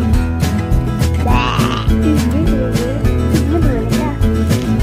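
No technical faults can be heard anywhere in the recording, and the signal stays stable and intact throughout.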